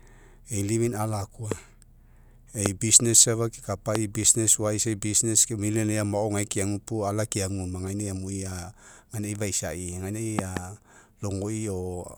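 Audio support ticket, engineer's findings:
Loud pop. Likely voltage transient from connector, switch, static or driver glitch, added onto the speech path. Sharp pops at 1.52–1.54 s, 2.66–2.68 s and 3.95–3.98 s; double pop 10.39–10.59 s. Peaks about 15–20 dB over speech, which continues underneath.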